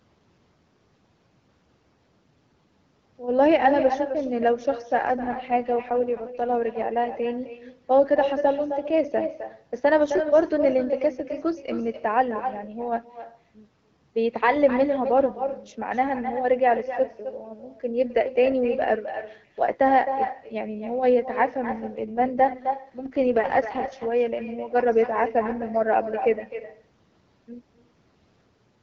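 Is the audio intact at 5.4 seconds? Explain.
No. At 5.4 seconds the speech turns rough, buzzy and synthetic, though the bandwidth stays the same and nothing drops out. This is an AMR rate drop, running from 5.03 to 6.61 s. The wideband codec, which carries the call in HD Voice at a fairly clean quality, has been pushed to a much lower mode, likely because of a weak radio link. The roughness fits a fall from 12.65 to about 6.6 kbit/s. At that rate the codec has fewer bits to describe each stretch of speech and puts more of them into error protection. Clarity returns once the rate climbs back.

The same moment also carries echo with no canceller, which runs through the whole clip. Every phrase the talker says is shadowed by a thinner copy about 9 dB quieter that arrives roughly a third of a second later. The far end's loudspeaker is feeding the talker's voice back into its microphone, and nothing removes it before it returns across the network.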